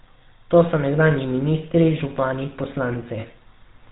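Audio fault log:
Throughout, GSM full-rate codec: the whole clip has that buzzy, gravelly grain you get when a vocal-tract model is driven by sparse, evenly spaced pulses. Nothing above 4 kHz survives, so it sounds dull and rough, which fits a 13 kbps GSM coder, and the damage is plainly audible.
3.20–3.25 s, lost GSM frames: for about 40 ms the decoder just reuses the last good frame. You hear a brief metallic, ringing smear instead of fresh sound, roughly two frames' worth.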